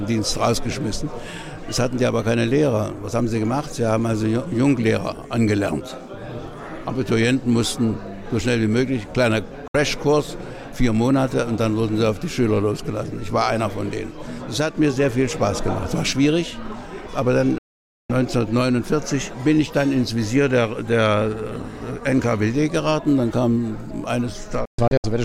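The audio has three digital broadcast dropouts, quick 3 ms fades to silence while the receiver muted lost frames: 9.68–9.75 s, 17.58–18.10 s, and scattered holes across 24.65–25.04 s.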